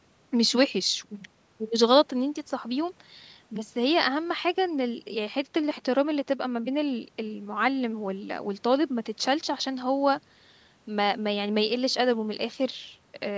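No faults heard: the speech carries the usual call microphone processing, with the lowest bass rolled off and nothing above 8 kHz, as expected for that path.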